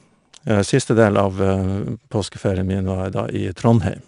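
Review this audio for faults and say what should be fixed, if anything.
A gritty hiss rides on the louder speech throughout, with nothing above 10.6 kHz. That is 4-bit ADPCM compression: each sample stored as a coarse step from a prediction, pointing to about 89 kbps. Keep a lossless master and encode only from it at higher resolution.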